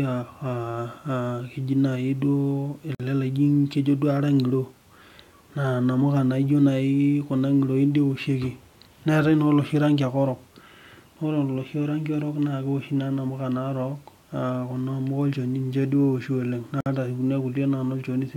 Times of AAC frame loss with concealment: none

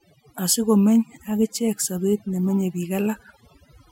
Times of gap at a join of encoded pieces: none

